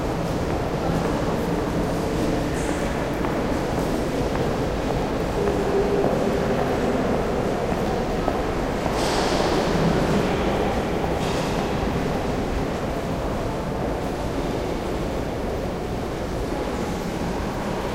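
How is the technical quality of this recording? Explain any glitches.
Three brief glitches at 1.36, 9.49 and 13.28 s, each a point where the sound jumps ahead. Each is likely a dropped buffer (overrun), with roughly 10 ms overwritten before capture and the two sides spliced together.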